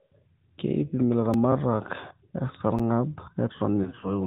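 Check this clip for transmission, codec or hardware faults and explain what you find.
Four kinds of fault are audible: narrowband mobile coding throughout, two brief dropouts, a repeated fragment at a chunk join, and a burst of lost frames near the end.

AMR narrowband mobile codec: Across the whole speech clip, the sound is squeezed through AMR-NB. The codec models the vocal tract and drives it with sparse pulses, so nothing above 4 kHz survives and the voice takes on a plainly audible buzzy, synthetic edge. The level of damage fits a mid-rate mode around 10.2 kbps. On a spectrogram, energy stops abruptly at 4 kHz, leaving an empty band above it for the full length.

Block of digital silence: At 1.34 s and again at 2.79 s the signal drops to silence and returns with no fade. The first gap lasts about 2.9 ms, which fits a 128-sample buffer that was not filled in time. The second lasts about 8.7 ms. 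The first is heard as a sharp tick, the second as a slightly longer tick or dip. A waveform shows a flat line with vertical edges, and a spectrogram shows a thin broadband stripe at each edge.

Overlapping chunks: From 3.58 to 3.61 s, about 25 ms of audio plays twice where two processing chunks meet. The chunks appear to be one second long, and each new one starts before the previous one finished. The result is a small stutter with a click at the join. On the waveform, the same short stretch appears twice in a row with a discontinuity between the copies. On a spectrogram, the same spectral slice repeats, with a faint vertical line at the seam.

Lost AMR speech frames: Between 3.83 and 4.19 s, several speech frames fail to decode. The pattern points to about six lost 20 ms frames, roughly 120 ms in total, scattered over 200 ms, with the longest run about 40 ms. Each time, the decoder repeats the last pitch and vocal-tract settings at falling gain. 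The sound is heard as dips and warbly smearing, and the voice returns weak and rough. On a spectrogram, harmonics freeze into flat, fading bands instead of moving.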